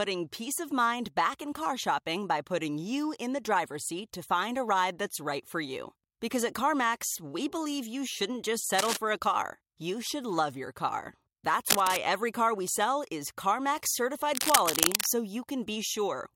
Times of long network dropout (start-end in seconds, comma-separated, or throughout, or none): none